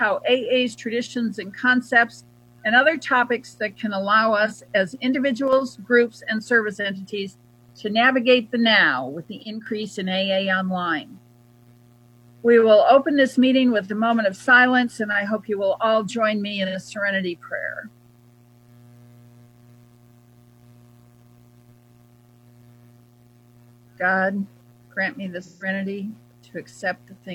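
At 4.45 s there's a brief smeared, phasey patch, about 43 ms, which fits a single lost AAC frame the decoder concealed. At 5.48 s (50 ms) and 9.42 to 9.66 s, the level sags by about 6 dB, likely one channel dropping out before the mono sum. AAC frame loss with concealment returns at 16.65 s (85 ms) and at 25.43 to 25.68 s, where the 171 ms gap smears longer.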